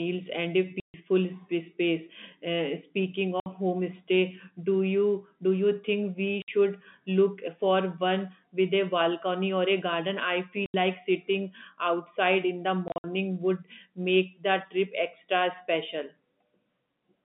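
Packet loss filled with silence cuts hard-edged gaps at 0.8 s (140 ms), 3.4 s (60 ms), 6.42 s, 10.66 s (80 ms) and 12.88 to 13.04 s. The receiver played silence for missing packets, and the multiples of 20 ms fit 20 ms packets.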